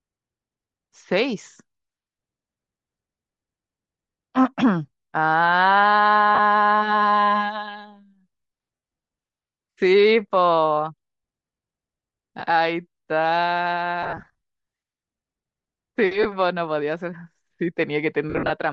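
A speech recording carries a grainy, breathy edge throughout, with the upper band sounding noisy rather than detailed. This is likely Bluetooth LC3 compression at a moderate rate that fits about 48 kbps in 10 ms frames. On a spectrogram the high frequencies look speckled and noise-filled instead of showing clean harmonic structure. Lost LE Audio frames cause brief smeared, hissy dropouts at 6.35–6.40 s, 8.75–8.83 s, 12.40 s and 16.23–16.25 s. Longer broken patches run from 14.03 to 14.33 s and from 18.30 to 18.51 s, made of short scattered gaps rather than one hole. Each time the decoder repeats the last spectrum with scrambled phase, fading it only once a loss runs past the first few frames. The waveform shows the envelope sagging into noise-like fill, and the spectrogram shows vertical bands of featureless texture.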